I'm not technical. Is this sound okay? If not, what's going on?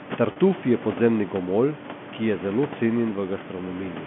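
No. From 0.32 to 0.36 s there is packet loss with pitch repetition: about 40 ms of speech, likely two lost packets, went missing, and the phone filled it by repeating the last bit of sound. You hear a brief buzzy hold, not the silent gap of a plain dropout.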